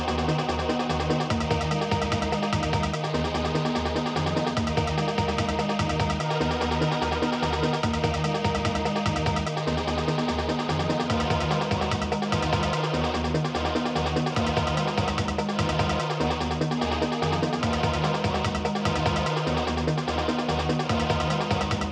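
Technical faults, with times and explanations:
No technical faults are audible anywhere in this clip.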